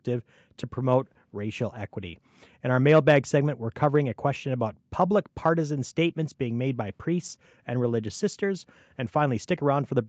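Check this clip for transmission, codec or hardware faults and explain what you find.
No transmission, codec or hardware faults are audible here.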